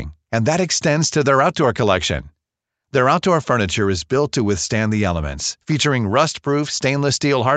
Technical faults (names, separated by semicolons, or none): none